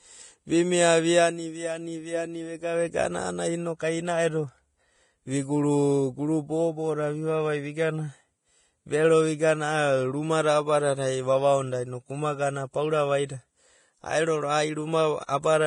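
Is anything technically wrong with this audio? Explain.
Yes. Throughout the speech there is heavy damage that sounds like Vorbis compression. Nothing reaches above 10.5 kHz, and the treble below that edge has turned hissy and grainy. Sibilants smear into noise and consonant attacks lose their edge. The likely cause is coarse quantisation of the residue on top of a smooth spectral floor, so fine detail is replaced by noise of similar energy. This is consistent with a bitrate of roughly 28 kbps. A plain low-pass filter would only dull the top end, whereas here the remaining treble is also roughened.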